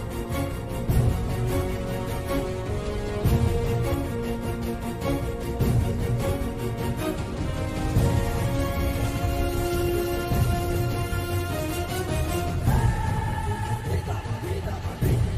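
No technical faults are audible.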